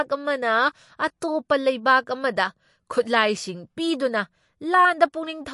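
MP3 compression runs through the whole of this speech recording, as plainly audible codec damage that is likely caused by lossy encoding at a low bitrate, around 48 kbps. Nothing remains above about 11.3 kHz, where the encoder cut the treble, and weak frequency components flicker in and out between frames. Pre-echo appears at 1.21 s as a brief hiss, about 13 ms long, just before a sharp attack. The encoder spread the quantisation noise meant for the loud onset across its whole block, so that noise leaks into the quiet moment beforehand and softens the attack.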